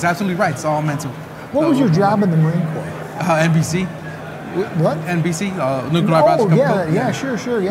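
Nothing in the recording stood out as a technical problem on listening.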